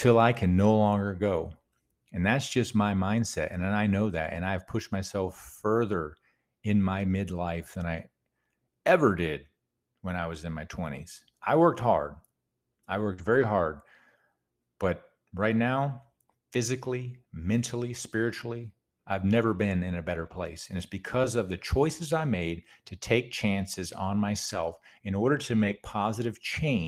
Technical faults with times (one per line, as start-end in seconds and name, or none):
1.35-1.37 lost packet rebuilt from error correction
13.13-13.20 short concealed packet loss
13.18-13.44 lost packet rebuilt from error correction
20.22-20.44 lost packet rebuilt from error correction
21.22-21.25 short concealed packet loss
21.23 lost packet rebuilt from error correction
24.45-24.75 lost packet rebuilt from error correction
25.55-25.77 lost packet rebuilt from error correction